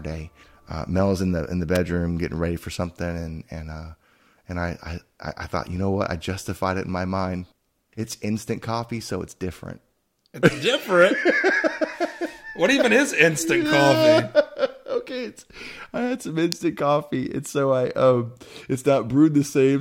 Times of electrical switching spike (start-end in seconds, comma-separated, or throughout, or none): 1.75, 16.52